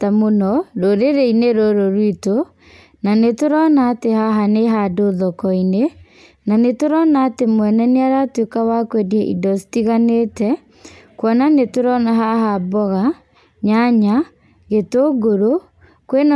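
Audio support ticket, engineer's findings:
Engineer's findings: no faults found in the speech recording.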